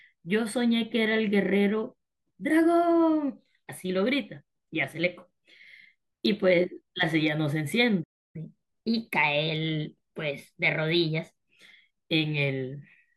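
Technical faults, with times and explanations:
8.03–8.36 s, playback stall: the speech halts in mid-flow and the output goes fully silent for about 310 ms before the sound resumes. A gap this abrupt, arriving mid-phrase rather than at a natural pause, most likely means the player ran short of incoming data or had its playback thread held up, so nothing reached the output until it recovered and carried on.
8.36–11.36 s, catch-up at higher speed: right after the gap the speech runs quicker and sits higher, roughly a semitone and a half above its normal pitch, for three seconds before settling back. The player is working through the backlog built up during the stall by resampling it at 1.1 times normal speed, and because resampling shifts rate and pitch together, the voice rises along with the tempo until the lost time is made up.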